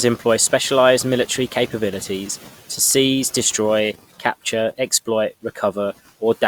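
No technical faults can be heard in this recording.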